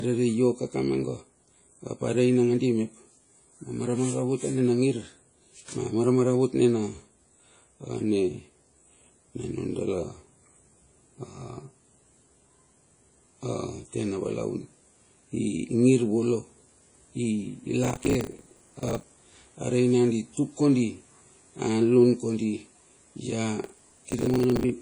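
Throughout, the speech sounds washy and ringing, with a hiss that swells and fades with the signal. Nothing reaches above 10.1 kHz. This is likely WMA compression, at a low bitrate near 32 kbps, where coarse quantisation spreads noise around each sound.

From 17.84 to 19.03 s, and again from 23.64 to 24.70 s, a gritty processor overload crackle tears through the audio. Dozens of short buffers, each around 10 ms, miss their deadlines. Each gap is filled with stale audio and leaves hard edges.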